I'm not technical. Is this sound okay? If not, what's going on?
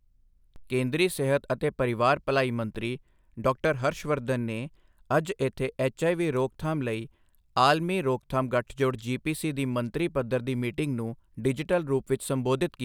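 No. There are two DC steps, at 0.56 s, just before "ਕੇਂਦਰੀ ਸਿਹਤ ਅਤੇ ਪਰਿਵਾਰ", and at 2.75 s, just after "ਸਿਹਤ ਅਤੇ ਪਰਿਵਾਰ ਭਲਾਈ". Each time, the resting level of the signal suddenly shifts. You hear a soft low thump that fades quickly. The speech continues unchanged.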